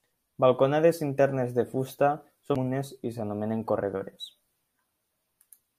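At 2.55 s a CD skip interrupts the speech: a jolt or disc flaw sent the laser to another track turn, so a tick and a very brief mute are followed by the speech resuming from a different point. Unlike a plain dropout, the audio does not continue where it left off.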